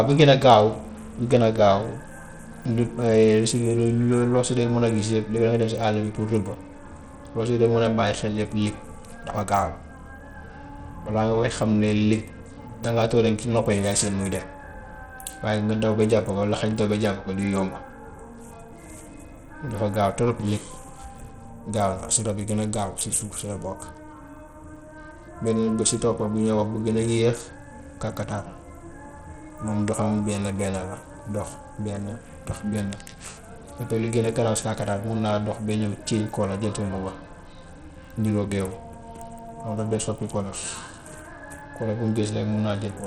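From start to finish, the speech carries plainly audible coding damage: the top end thins out and flickers, and a gritty, grainy layer rides along with the sound. That points to Bluetooth SBC compression running starved, likely at a low bit pool, which fits a rate of around 80 kbps. With so few bits, the upper sub-bands get little or nothing, and what's left is quantised coarsely enough to smear and roughen it.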